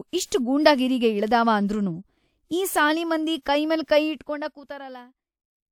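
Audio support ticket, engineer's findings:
Zipper noise, 4.04 to 5.14 s. Speech drops about 25 dB with a fine ticking riding on it. Gain stage is stepping the level around 50 times a second, unsmoothed. Each jump clicks.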